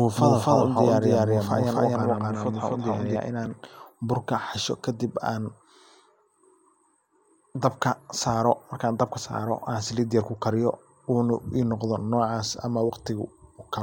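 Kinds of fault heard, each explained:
Doubled audio track: speech was likely captured a second time through a slower path, so a full-band copy about as loud as the original trails it by roughly a third of a second, without room colour, from the start until stopping abruptly at 3.16 s.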